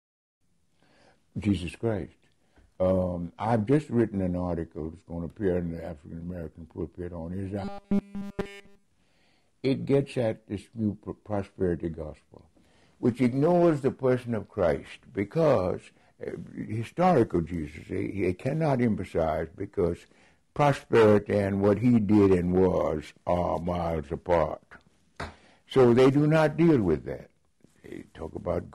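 From 7.64 to 8.86 s the sound collapses into a rigid metallic buzz at about 200 Hz, which still loosely tracks the original contour. That's robotic sound from repeated short buffers, likely because fresh audio stopped arriving in time and playback kept looping a tiny chunk instead. A 200 Hz buzz points to a loop of roughly 5 ms. Basically the whole stretch is repeated material.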